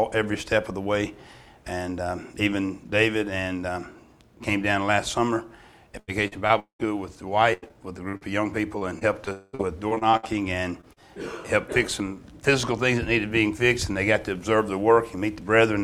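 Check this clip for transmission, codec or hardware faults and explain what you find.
Two faults are audible, both on the network side: repeated packet loss in two stretches and a brief long network dropout inside the second.

Repeated packet loss (robotic sound) runs from 5.99 to 6.81 s and again from 7.53 to 10.98 s. Audio kept failing to arrive, and each hole was bridged by extending the last received sound. The first stretch has four gaps totalling 340 ms, the longest 196 ms, with concealment filling 41% of the span. The second has fifteen shorter gaps, none over 90 ms, totalling 500 ms. Both stretches sound choppy, with pieces missing.

A long network dropout is the likely cause of the break from 9.33 to 9.55 s. About 200 ms of audio is lost there, and the receiver fills nearly all of it by continuing the previous sound, so it comes across as a smeared, buzzy hold with no silence. 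The audio then resumes further on, with the missing part absent. It sits inside the second packet-loss stretch.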